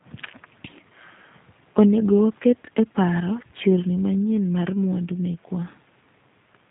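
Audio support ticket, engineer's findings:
G.729 codec damage throughout: rough, synthetic speech. Spectrogram shows a flat ceiling near 3.8 kHz. Sparse pulse excitation rebuilds each 10 ms frame, consistent with 8 kbit/s G.729A.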